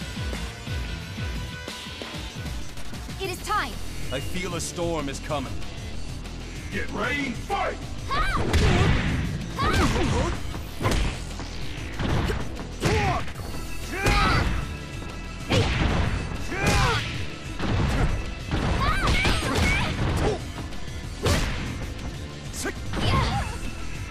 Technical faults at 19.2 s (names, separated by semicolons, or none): processor overload crackle